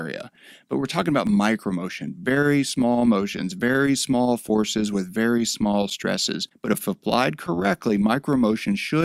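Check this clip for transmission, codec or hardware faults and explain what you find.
Two short clicks point to dropped samples. They fall at 0.36 s and 1.27 s. Each is a single sharp tick, heard as a thin vertical line across the spectrum. The likely cause is that a tiny run of samples, less than a millisecond's worth, went missing from the stream. The waveform then jumps straight from one value to a later one. That step is too brief to remove any audible sound, so only the click remains.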